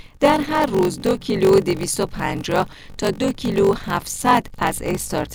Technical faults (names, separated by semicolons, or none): block size mismatch (padded)